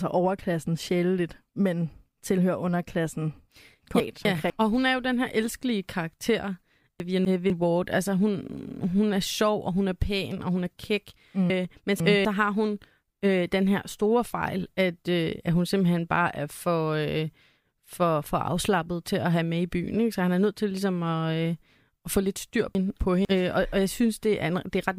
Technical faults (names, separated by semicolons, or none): chunks out of order